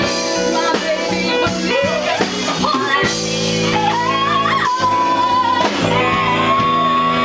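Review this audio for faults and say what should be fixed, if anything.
No faults turned up in this audio, so nothing needs to be fixed.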